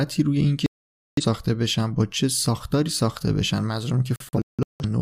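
A digital broadcast dropout strikes twice in this speech. From 0.66 to 1.24 s the receiver stops getting usable frames and mutes, leaving one solid gap of about 0.51 s before the signal recovers mid-programme. From 4.16 to 4.85 s reception breaks up instead: scattered holes spread over 640 ms remove about 0.43 s in all, the longest lasting 171 ms. Whatever was broadcast during those gaps is simply missing.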